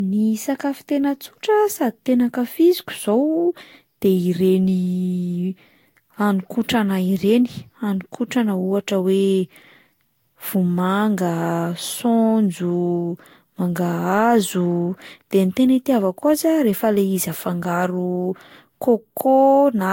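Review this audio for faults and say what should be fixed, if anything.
Throughout, the speech sounds swirly, hollow and smeared, attacks are soft, and nothing reaches above 16.6 kHz. That's generation loss, likely from about four Vorbis passes near 64 kbit/s, each adding fresh quantisation noise on a new frame grid. Work from a lossless master and encode once.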